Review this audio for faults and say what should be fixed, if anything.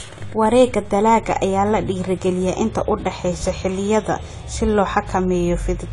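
Throughout the speech, nothing sits above 11.5 kHz and the top end sounds dull and smeared, with a fizzy, warbling texture on sibilants. This is likely AAC compression, which fits AAC-LC at around 32 kbps discarding and noise-filling bands. Encode at a higher bitrate.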